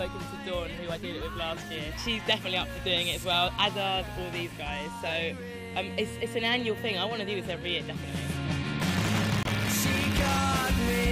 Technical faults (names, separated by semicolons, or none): buffer tearing; corrupt frame muted